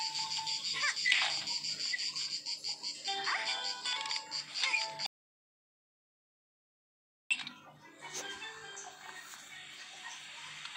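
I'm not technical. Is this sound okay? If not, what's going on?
No. The input was likely lost for a moment, perhaps a loose connection or a stray mute, while recording carried on. That's an audio dropout to silence: from 5.06 to 7.31 s, about 2.2 seconds, the sound stops dead, with no background at all, and whatever happened then is gone.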